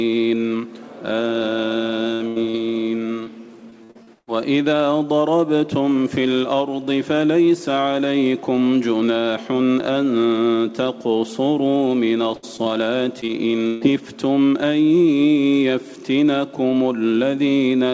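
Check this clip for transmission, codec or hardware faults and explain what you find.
There are packet-loss faults in three forms, all clustered early and mid-clip. The audio stops at 8 kHz, which fits a wideband call codec such as G.722.

At 2.14–2.22 s and 2.28–2.38 s, two bursts of packet loss occur. The receiver stretches the last sound and fades it. Then the sound jumps ahead, with 60 and 80 ms lost.

At 2.50–2.56 s, a short concealed packet loss covers a 40 ms gap. The receiver patches it and blends back, leaving a brief smear or wobble.

At 3.24–4.29 s and 12.35–13.83 s, repeated packet loss (robotic sound) occurs. Six gaps fall in each stretch, the longest 81 and 144 ms. Constant patching makes the sound choppy, with pieces missing.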